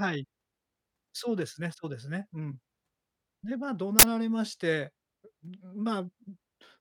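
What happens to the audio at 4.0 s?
Right there you get an uninitialised buffer, from 3.99 to 4.03 s: a 40 ms block of leftover memory played as audio, so a harsh burst of digital noise.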